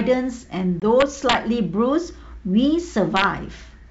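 At 0.80 to 0.83 s, packet loss on an ADPCM call leaves a 20 ms hole of silence, likely a couple of lost packets. The decoder's predictor and step size fall out of step, so the speech resumes with brief distortion. The waveform shows a hard-edged gap, and the spectrogram a vertical blank stripe.

Integer overflow strikes from 1.00 to 1.35 s, with peaks pushed about 3 dB past the limit, and again at 3.17 to 3.24 s at about 2 dB. Those peaks wrap to the opposite sign instead of limiting, producing violent cracks. The waveform shows sudden full-range flips, and the spectrogram broadband vertical streaks.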